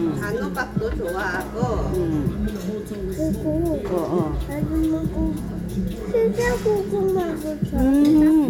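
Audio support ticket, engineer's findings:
No audible faults found.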